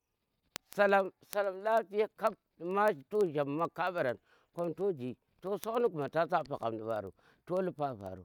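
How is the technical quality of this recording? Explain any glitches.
The recording has a problem with word clock ticks, present from about 0.12 s right through to 8.23 s. A tick lands roughly every 50 ms throughout the speech. The receiving device's clock isn't locked to the sender's, so one sample is slipped each time they drift apart. The steady rate points to a clock mismatch of roughly 400 ppm.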